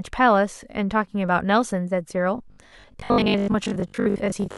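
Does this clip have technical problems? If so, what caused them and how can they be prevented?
Yes. From 2.38 s to the end there's robotic sound from repeated short buffers: a rigid 50 Hz buzz, likely from a 20 ms chunk replaying over about half the audio. A larger jitter buffer or more processing headroom would prevent it.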